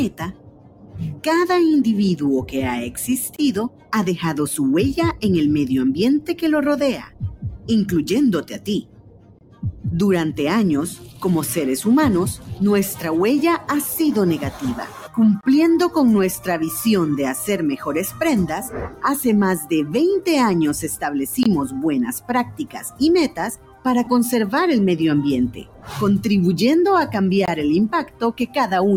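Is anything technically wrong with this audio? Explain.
Yes. There are several faults.

A speech-style noise suppressor applied to music or sounds runs through the whole clip, with level swings of around 15 dB. It treats sustained tones and ambience as noise. Sharp onsets survive while held material sinks, so the sound pumps rather than simply dropping in level.

Sound cut by the noise suppressor is heaviest from 0.09 to 19.95 s, with dips of about 16 dB over roughly seven seconds in total. Shorter cuts of about 15 dB fall at 21.67–23.85 s, 25.50–25.98 s and 28.04–28.57 s. Decays are clipped short and sustained parts fade, unlike a clean silence.

A gap between chunks of 23 ms appears at 3.36, 9.39, 15.41, 21.43 and 27.46 s. The audio was delivered in 6-second blocks. The result is hard-edged silent holes at a strict regular spacing, where nothing is smeared or lost.

Lost LE Audio frames occur at 14.64 s (15 ms) and at 24.04–24.07 s (22.5 ms). 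These lengths fit two and three 7.5 ms LC3 frames. The decoder fills the loss with a reused spectrum with scrambled phase. That produces a brief noisy smear, not the clean silence of the chunk gaps.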